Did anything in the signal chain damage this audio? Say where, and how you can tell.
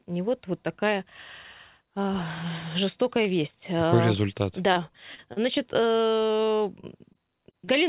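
Yes, at the network stage: repeated packet loss (robotic sound) from 4.73 to 5.39 s and from 6.08 to 7.71 s. Audio drops out in short holes up to about 35 ms, each patched by stretching the previous sound, so it turns choppy and robotic. A spectrogram shows repeated, frozen harmonic slices and abrupt breaks below the 4 kHz ceiling of the G.711 call path.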